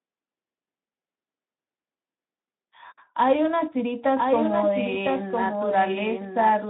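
From 4.16 s to the end, a doubled audio track appears: a second, full-band copy of the speech runs roughly a second behind, about 5 dB quieter, with no decay. It likely comes from a slower capture path. Waveform and spectrogram show the same patterns repeated, offset and fainter, within the narrowband picture that stops near 3.8 kHz.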